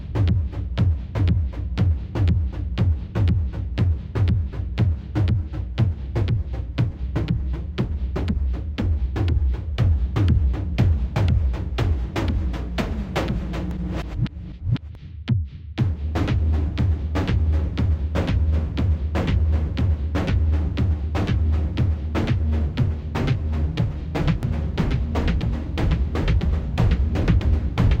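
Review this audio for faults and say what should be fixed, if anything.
A doubled audio track appears at 24.43 s and runs to the end of the clip. A second full-band copy of the sound trails the original by about a second and a half, at roughly 5 dB lower. It cuts in abruptly with no decay or room colour, so it reads as a clean repeat rather than an echo. The likely cause is a second capture path feeding the same material into the mix with extra latency. To prevent this, route each source through a single capture path and monitor the mix for duplicate inputs before recording.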